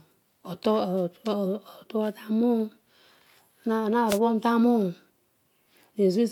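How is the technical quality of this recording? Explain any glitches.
There's one glitch in the speech, a wireless microphone noise hit from 4.08 to 4.19 s. The radio link from the analogue FM mic fades briefly as reflected signals cancel, so receiver noise jumps up and you get a quick swish of static across roughly a tenth of a second.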